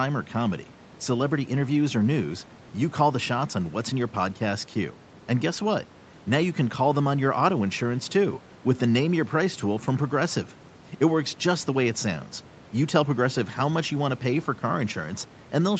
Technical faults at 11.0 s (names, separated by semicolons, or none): none